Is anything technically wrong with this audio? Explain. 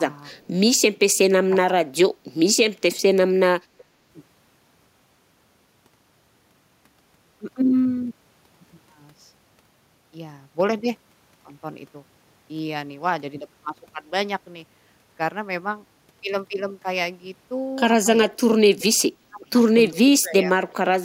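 Yes, there are two faults in this speech clip.

Speech suppressed in double talk, at 1.45–1.5, 1.67–1.88, 18.29–18.71, 18.98–19.02, 19.3–19.45 and 20.04–20.91 s: the voice dips by about 15 to 25 dB in brief pieces. The likely cause is an echo canceller mistaking simultaneous talk for loudspeaker echo and turning down the talker.

Echo leak, at 3.78–3.84 and 19.9–19.94 s: a faint delayed copy of the voice, about 30 dB below it and lagging by 373 ms, slips through. This is likely a loudspeaker echo that the far end's canceller failed to remove fully.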